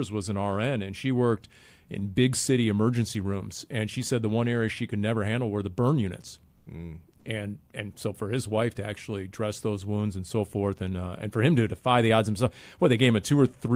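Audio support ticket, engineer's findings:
Comfort noise in place of the background, likely from discontinuous transmission (Opus-style DTX) halting the send during pauses. Receiver fills the gaps with smooth synthetic noise. At 6.57–6.65 s after "were the burn units", and 7.17–7.25 s before "and and so for", 80 ms each. Background sits about 43 and 41 dB below loud parts and becomes flat and featureless, with level shifts of about 1 dB and 4 dB.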